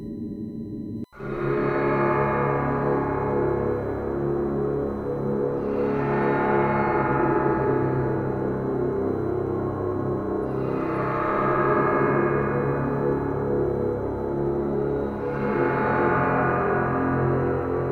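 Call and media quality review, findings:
USB whine, present throughout. Steady fixed-pitch tone at 1 kHz, strongest at that frequency, sitting roughly 40 dB below the signal. Probable component: USB audio interface or its host port. Mechanism: current drawn in 1 ms bus frames modulates the supply or ground return, and that 1 kHz ripple couples into the analogue path. Check grounding, try a powered hub or isolator.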